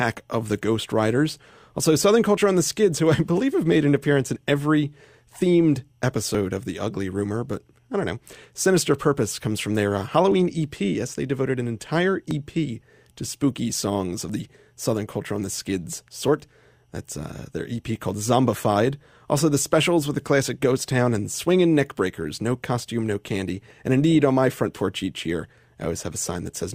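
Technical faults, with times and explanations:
2.37, 4.36, 6.35, 10.32, 12.31, 14.30 and 16.28 s: overlap between stream segments. Brief clicks or tiny skips in the speech recur at 2-second spacing, each losing 5 to 13 ms of sound. At these joins between 2-second segments the time stamps overlap, so the player trims audio that was never actually doubled, and the waveform jumps abruptly.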